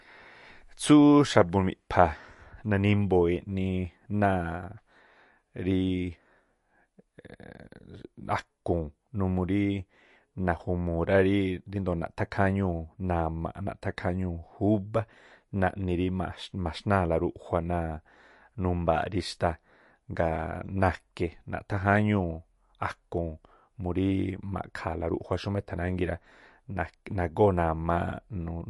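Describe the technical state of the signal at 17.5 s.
At 17.5 s the speech carries the same damage heard across the whole clip, most likely from MP3 compression at a low bitrate, around 48 kbps. Short of bits, the encoder removes everything above 11.3 kHz and zeroes weak frequency lines that flicker on and off frame to frame, so the speech sounds watery and swirly, with smeared consonant attacks. A spectrogram shows a flat ceiling at 11.3 kHz and patchy, blinking holes below it.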